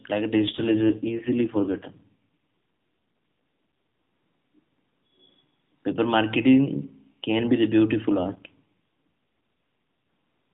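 Speech over a narrowband mobile link. From 0.40 s to 2.19 s there is an AMR rate drop. The voice turns rougher, buzzier and more synthetic, then recovers. The band stays the same and there is no gap. The codec gave up bits to error protection on a weak radio link. The coarseness points to a fall from about 12.2 kbps to 4.75 kbps. Outside that stretch the narrowband coding sounds light, with nothing above 4 kHz.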